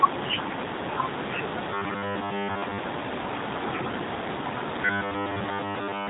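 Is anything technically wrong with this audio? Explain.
Yes. Throughout, the speech sounds dull and slightly rough and synthetic, with nothing above about 3.8 kHz. That plainly audible damage points to the G.729 codec at a rate consistent with 8 kbit/s. It rebuilds each 10 ms frame from a vocal tract filter, a pitch predictor and a few pulses rather than carrying the waveform itself.

From 4.85 s to the end, the voice turns into a rigid, metallic robotic buzz at 100 Hz that still loosely tracks the speech. This is likely robotic sound from repeated short buffers. Audio arrived too slowly, so roughly 10 ms chunks were replayed in place of most of the real signal, stamping that fixed pitch onto it.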